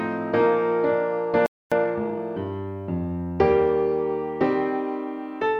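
At 1.46 s the audio cuts to silence for about 255 ms, a playback stall, likely the player running dry or its thread blocking. From 1.72 to 2.22 s comes time-compressed catch-up: the audio runs 1.5 times fast but with unchanged pitch, unlike a speed-up that also raises pitch.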